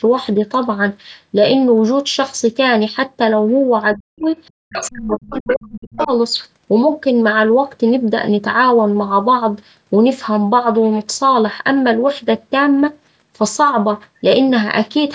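Between 3.95 and 4.26 s, and again from 4.64 to 6.1 s, the echo canceller most likely mistook simultaneous talk for loudspeaker echo, causing speech suppressed in double talk: the talker's speech drops sharply, by roughly 40 dB at its deepest, and breaks up for about 1.3 seconds in total.

Within that second stretch, the other side's voice leaking through appears at 4.75 to 4.9 s, 5.11 to 5.69 s and 5.94 to 6.08 s, likely because the canceller left some loudspeaker pickup in the microphone signal. These brief scraps of a second voice sit around 10 to 15 dB below the talker.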